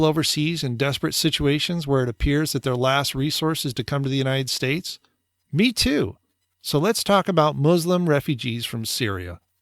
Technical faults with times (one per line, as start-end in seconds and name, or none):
none